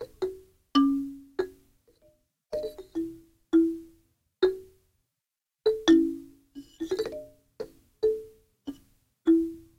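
No technical faults can be heard at any point in the audio.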